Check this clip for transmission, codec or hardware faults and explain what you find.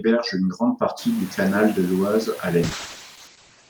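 One transmission fault is present: a call bitrate drop. It runs from 2.65 s to the end of the clip. The top band collapses from 20 kHz to 8 kHz. The speech turns muffled and rough for about 1.05 s. That fits the encoder being pushed from around 64 kbps down to about 9 kbps. It coarsens the coding and trims the highs. Room noise rises at around 1 s and sits about 21 dB under the speech. It belongs to the recording.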